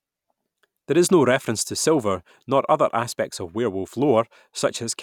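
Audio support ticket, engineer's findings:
No audible faults found in this recording.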